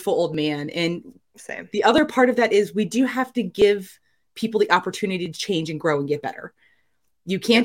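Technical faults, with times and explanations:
0.34–6.89 s, clock drift buffer slips: mismatched device clocks likely let the buffer drift until samples drop or repeat, so a click recurs every 1.64 s, about five times.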